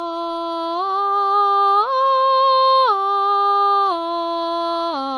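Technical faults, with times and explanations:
Throughout: transcoding between lossy codecs. The music was likely encoded by one lossy codec and then re-encoded by another. The texture fits a low-rate MP3 stage followed by HE-AAC at an even lower rate. The second encoder spends its small bit budget reproducing the first one's artefacts while adding its own, so both kinds of damage sound layered together. Nothing survives above 14.5 kHz, which leaves the top end dull.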